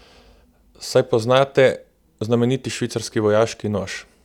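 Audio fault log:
No technical fault can be heard anywhere in the speech recording; the signal arrives intact, with nothing in its path disturbing the sound.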